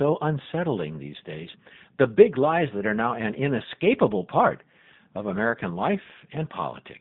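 From start to finish the speech carries G.729 codec damage, plainly audible. The band runs from about 150 Hz to 3.7 kHz, so the sound is thin and muffled. At 8 kbit/s each frame is rebuilt from a vocal tract filter, a pitch estimate and a few pulses, which leaves the speech rough and synthetic.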